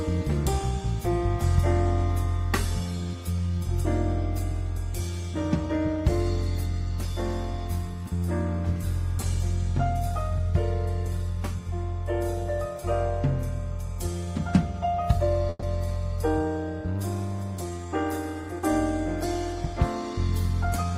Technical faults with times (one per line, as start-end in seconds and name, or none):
15.49-15.64 call audio freeze
17.51-17.86 jitter buffer speed-up